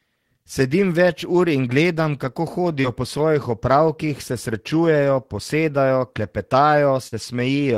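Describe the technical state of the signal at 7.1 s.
At 7.1 s there is a short concealed packet loss, from 7.08 to 7.14 s. About 40 ms of speech never arrived, and the receiver extrapolated the preceding sound for roughly 45 ms before crossfading back, producing a brief smear or wobble where detail is lost.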